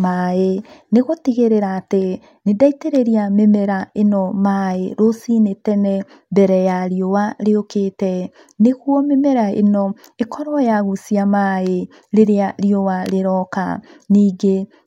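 Nothing in this speech recording stands out as a technical fault, so there's nothing to flag here.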